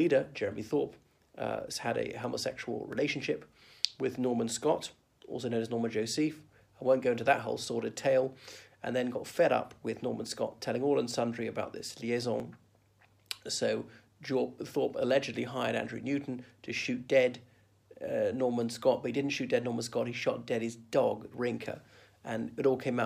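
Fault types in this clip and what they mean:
Dropped buffer (overrun): two abrupt jumps in the sound, at 2.93 s and again at 12.40 s, each with no gap of silence. The audio simply resumes a little further along, skipping roughly 10 ms each time. This is likely an overrun, where the recording software failed to read a block of samples before the hardware overwrote it, leaving the audio on either side spliced directly together.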